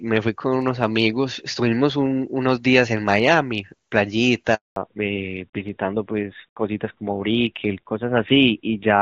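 A handover gap runs from 4.54 to 4.76 s. The call was passed from one network to another, and for about 220 ms no speech frames reached the receiver. The speech fades out over a few tens of milliseconds and then stops completely. Anything said in that stretch is simply missing, and the sound comes back only once the new link begins delivering audio.

A fallback to narrowband begins at 4.76 s and lasts to the end of the clip. Before the switch, the speech carries the full HD Voice band, which sounds consistent with AMR-WB at around 23.85 kbit/s. After it, the new link is using an older narrowband codec, which points to AMR-NB at about 7.4 kbit/s. Nothing above 4 kHz survives, so sibilants and breath lose their crispness and the speech turns muffled and rougher.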